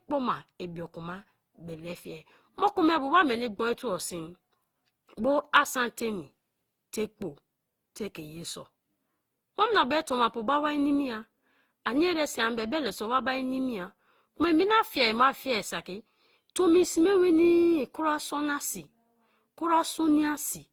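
Generation loss runs through the whole speech clip. It sounds swirly, smeared and hollow, and attacks blur. Nothing reaches above 20.3 kHz. The likely cause is Opus re-encoding, about seven passes, each adding fresh quantisation noise.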